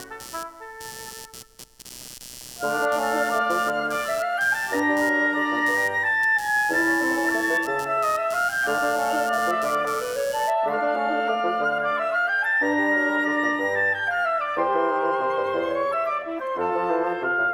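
From the start until about 10.52 s, a rapid buzzing chirp sits beneath the sound, pulsing at around 150 times a second and lying roughly 20 dB under the signal. Its rhythm follows nothing in the audio itself. This is computer activity noise: as the processor, graphics card or mouse shift their load, they disturb the ground the audio circuit shares with them, and that fluctuation leaks into the recording as this pulsing interference.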